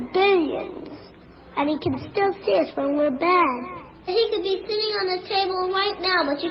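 Nothing stood out as a technical problem on listening to the audio.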